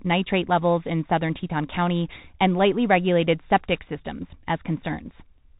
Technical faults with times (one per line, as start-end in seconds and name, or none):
0.00-5.59 Bluetooth CVSD headset codec